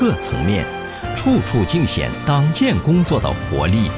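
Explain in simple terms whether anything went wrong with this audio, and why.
No faults can be heard.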